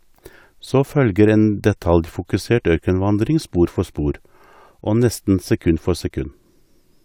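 Nothing technical goes wrong anywhere in this stretch of speech, so there's no fault to point to at any moment.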